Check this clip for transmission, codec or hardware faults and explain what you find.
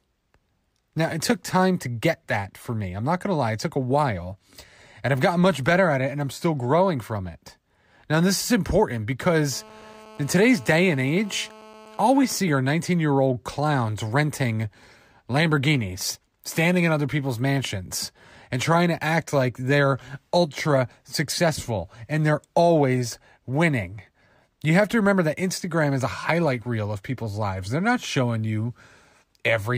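One hardware fault is present. From 9.52 to 12.37 s, a steady, hard, raspy 217 Hz buzz sits about 23 dB below the speech. This is GSM phone buzz: a nearby 2G phone's call bursts are being rectified by the audio circuitry.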